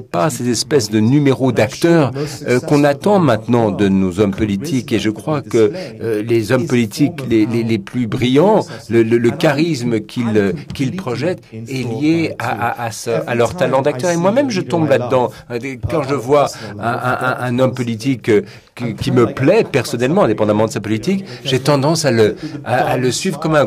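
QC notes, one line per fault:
0.15 to 23.58 s, clock slip clicks. A faint, regular tick runs through the whole span, roughly every 0.15 s, about seven per second. That adds up to around 150 ticks. Each one is a tiny discontinuity, consistent with a single sample being dropped or repeated. The cause is likely two devices running on unsynchronised clocks, off by roughly 150 ppm. Each time the drift reaches a full sample, the stream jumps and ticks. The ticks are clearest on loud, sustained sound and vanish in silence.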